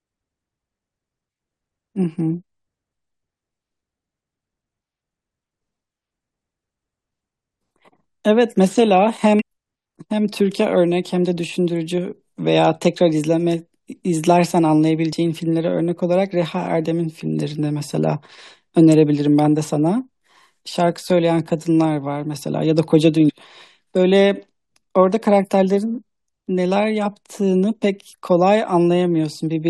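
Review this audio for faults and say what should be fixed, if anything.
Damaged data in a compressed stream causes brief glitches at 9.39–9.42 s, 15.13 s, 23.26–23.30 s and 28.13 s, where the decoder misreads corrupted frames and resynchronises. Transfer and store the file with checksums or error-protected containers, and re-fetch any damaged copy from the source.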